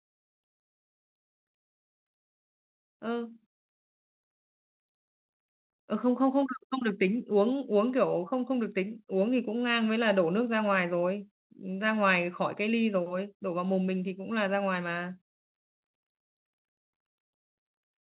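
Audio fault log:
There is no fault.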